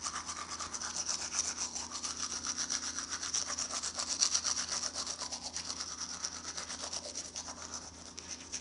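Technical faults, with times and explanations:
Throughout, 4-bit ADPCM compression. Each sample is stored as a 4-bit step from a prediction. The coarse error becomes a plainly audible gritty hiss that follows the loud sounds. Nothing reaches above 10.6 kHz, which fits a sample rate near 22 kHz.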